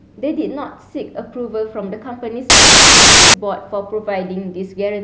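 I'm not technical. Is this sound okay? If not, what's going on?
No. From 2.50 to 3.34 s the speech is replaced by a harsh burst of very loud static with abrupt edges. This is file tags played as audio: the file's embedded cover picture, stored as compressed data, is being read and played back as if it were sound.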